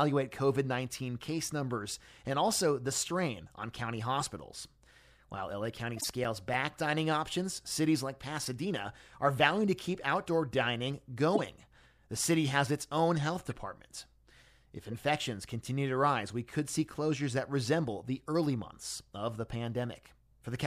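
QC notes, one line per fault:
4.20 to 14.94 s, corrupt frame decoded: five short bursts at 4.20–4.26 s (after "the strain on county"), 5.97–6.06 s, 11.35–11.40 s, 13.51–13.53 s (after "has its own health") and 14.91–14.94 s (before "continue to rise we"). Each is a damaged compressed frame the decoder played anyway. Misread codes and gains put energy at the wrong frequencies for a few frames, which is heard as a chirp or noise blip. The bursts peak at about -15 to -40 dBFS, loudest at 11.35 s.
5.65 to 6.69 s, CD scratch ticks: eight regular ticks, each 5 ms or shorter, at about seven per second. This fits one scratch passing under the laser on each disc turn, where the player interpolated or muted samples its error correction could not rebuild. The ticks overlap the frame burst at 5.97 s.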